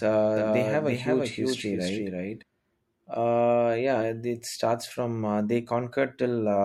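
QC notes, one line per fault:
0.37 to 2.43 s, doubled audio track: the speech was likely picked up a second time through a slower path and mixed back in, so a full-band copy trails the original by roughly 0.3 s at about 5 dB lower. Each syllable is followed by a flat, dry repeat with no decay or room colour. The copy starts and stops abruptly at the edges of the span.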